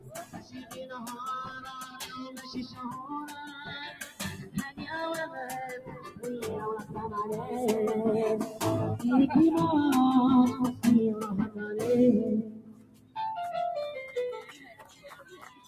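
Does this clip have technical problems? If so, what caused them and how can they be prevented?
Yes. Throughout, the sound pumps and thins: sustained parts and decaying tails keep sinking while sudden onsets come through at nearly full level, so the overall loudness swings by about 15 dB. This is a noise suppressor applied to music or sounds. A processor tuned for speech treats anything steady or reverberant as background noise and pulls it down, and the material here is not speech. To prevent it, bypass or disable speech noise suppression whenever the source is not speech.

Seven sections are also sound cut by the noise suppressor. Each one dips audibly, with its body or tail sagging. The dips fall at 0.0–0.83 s (about 11 dB deep), 2.3–2.79 s (about 7 dB), 4.44–4.79 s (about 13 dB), 5.79–6.24 s (about 10 dB), 11.46–11.78 s (about 12 dB), 12.42–13.16 s (about 14 dB, the deepest), and 14.55 s to the end (about 10 dB). 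In each case the suppressor judged that stretch to be noise and attenuated it harder than its surroundings. Turning suppression off, or using a mode meant for music or ambience, would keep these passages intact.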